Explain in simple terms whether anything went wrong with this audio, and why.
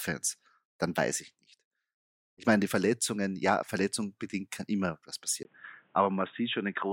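At 5.43 s, right after "bedingt kann immer was", the speech suddenly turns dull and boxy to the end, with a tiny gap at the change and a faint new hiss. This is likely an input switched to a poorer device, one passing nothing above 3.8 kHz.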